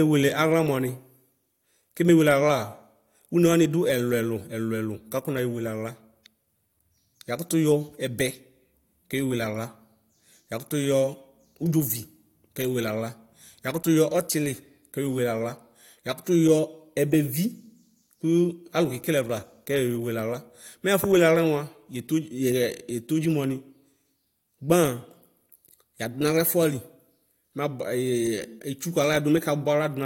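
No technical faults detected.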